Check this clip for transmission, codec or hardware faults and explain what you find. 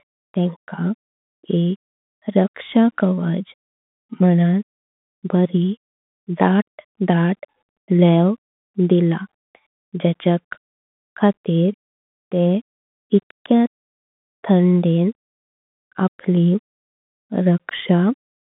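The clip carries one fault, present throughout: Bluetooth CVSD headset codec distortion. The speech is confined to roughly 150 Hz to 3.6 kHz, with nothing above 3.8 kHz. The one-bit up/down coding, consistent with a 64 kbps link, lets loud high-frequency sounds outrun the adaptive step. That makes s sounds scratchy and leaves a granular hiss beneath the voice; the codec damage is plainly audible.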